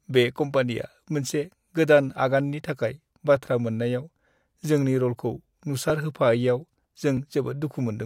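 A speech recording with clock drift buffer slips. Brief clicks recur every 1.27 s, from 0.82 s to 7.17 s, about seven in all. The likely cause is two unsynchronised clocks differing by roughly 0.1%, so a buffer periodically drops or repeats a few dozen samples.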